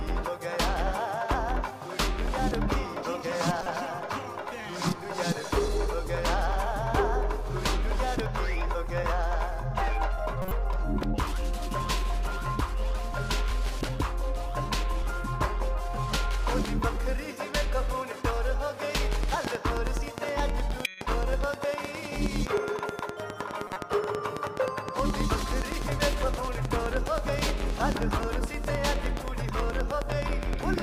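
At 3.57–3.67 s and 10.42–10.52 s, a corrupt frame decoded gives short chirpy bursts, around -20 and -15 dBFS. Damaged frames were played anyway, so energy lands at wrong frequencies, showing as smeared spectrogram blotches. From 19.13 to 30.75 s, a regular train of clicks runs at 9.56 per second, about a hundred ticks peaking roughly 15 dB above the sound, likely interference from nearby equipment. They appear as evenly spaced vertical lines on the spectrogram and near-identical spikes in the waveform. Within it, two more corrupt frames blip at 20.85–21.01 s (near -10 dBFS) and at 23.67–23.76 s.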